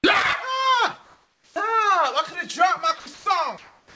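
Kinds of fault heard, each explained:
Comfort noise in place of the background: From 1.04 to 1.56 s the quiet background, about 42 dB below the loudest sound, becomes a steady, featureless hiss at the same level, likely from discontinuous transmission. Unlike a dropout, nothing goes silent; only the background's texture disappears.
Onset clipped by the voice detector: At about 1.54 s the returning sound starts abruptly, its first 20 ms replaced by the same synthetic noise, likely because the detector reopened late. Unlike a dropped sound, only the soft beginning is missing and the rest continues intact.
Sound dropped by the voice detector: At 3.00 to 3.06 s, 3.14 to 3.26 s and from 3.58 s to the end, sound already under way gives way to steady noise, losing 60, 120 and 140 ms of it. This is likely quiet sound mistaken for background, so the cuts fall mid-sound rather than at a start.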